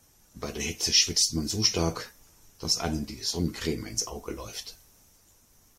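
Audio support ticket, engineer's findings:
No faults found in playback.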